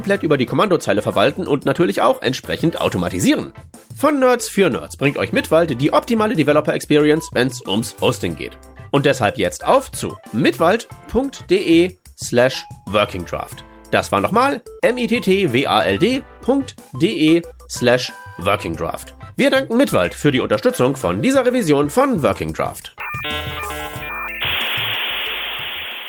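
No technical faults can be heard anywhere in the audio; the signal stays steady and intact throughout.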